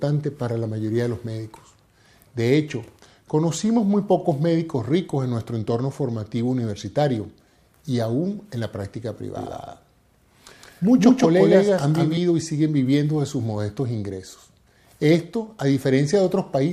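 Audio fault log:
9.35 to 12.17 s, doubled audio track: the sound abruptly splits into two identical layers, with a second full-band copy trailing around 150 ms behind at about the same loudness as the original. Every onset arrives twice in a slapback stutter, with no decay or room colour on the late copy. The doubling cuts in and out sharply at both ends, most likely because the same audio was captured a second time through a slower path and mixed back in.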